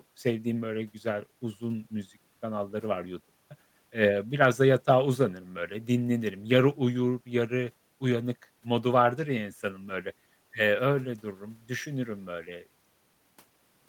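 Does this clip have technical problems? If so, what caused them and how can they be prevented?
No, nothing in this speech recording stands out as a technical problem, so there's nothing to trace back or guard against here.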